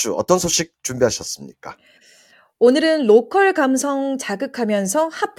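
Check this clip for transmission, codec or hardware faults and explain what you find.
One fault stands out in this speech clip. At 2.73 s there is a bit error spike. A single flipped bit made one sample jump by a power of two, reaching about -25 dBFS, then return at once. It sounds like one sharp, broadband tick unrelated to the speech.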